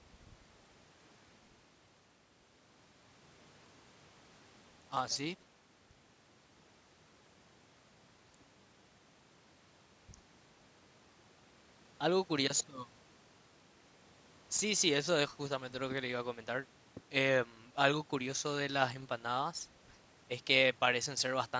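Speech, with no technical faults to report.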